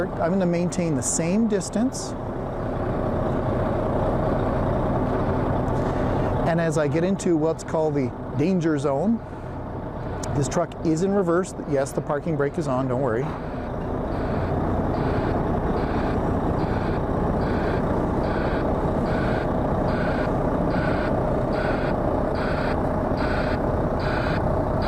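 Nothing technically wrong was found in this recording.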